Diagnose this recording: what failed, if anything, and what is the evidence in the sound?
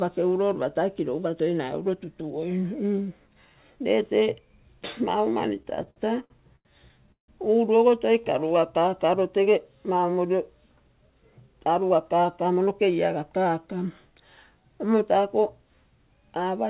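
Repeated stalls (stutter), network and jitter buffer stage: between 5.58 and 6.67 s, packets arrived too late or too slowly to keep the buffer fed, and it ran dry nine times. Each time, the receiver stretched the last sound to cover the hole, filling 270 ms in all, about a quarter of that stretch, with the longest gap at 89 ms. No audio is lost, but the sound drags and catches repeatedly.

Call audio freeze, network stage: from 7.12 to 7.30 s the sound stops moving for 162 ms. A short continuation of the last sound fades out and is followed by about 120 ms of silence. Playback then resumes exactly where it left off, with nothing skipped, and everything after it runs 162 ms later. The likely cause is a burst of packets held up in transit, which drained the jitter buffer completely until they arrived.

Jitter buffer slow-down, call processing stage: at 8.21 to 9.06 s the buffer was rebuilding its reserve. 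It did this by repeating single pitch periods and slivers of pauses over and over, which added 73 ms. The sound plays at 92% speed with its pitch unchanged, so sounds are drawn out.

Jitter buffer speed-up, call processing stage: from 11.07 to 12.68 s the buffer held more audio than its target delay. The receiver trimmed short chunks of one or a few pitch periods, repeatedly, removing around 150 ms in total. The sound runs at 109% speed with the pitch intact, so it comes across as hurried. All of this sits on a narrowband call path with nothing above 4 kHz, which fits 64 kbps G.711 A-law.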